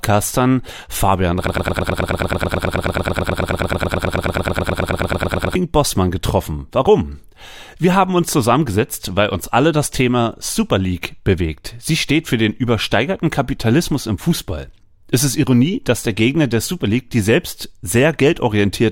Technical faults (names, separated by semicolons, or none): broken-record loop